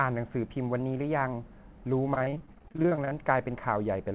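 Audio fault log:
2.14–3.13 s repeated packet loss (robotic sound): 18 dropouts of up to 22 ms each are filled by extending the preceding sound, making about a third of the span choppy, with pieces missing.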